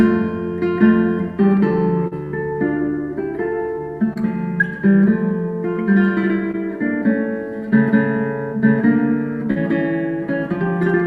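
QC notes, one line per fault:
2.07 s, 4.13 s, 6.51 s, 9.51 s: short concealed packet loss. About 40, 20, 20 and 40 ms never arrived, and the receiver patched each gap by extending the preceding sound before crossfading back. This gives a brief smear or wobble. On a spectrogram, harmonics in a voiced patch run flat and unchanging, and the waveform shows a repeated cycle there.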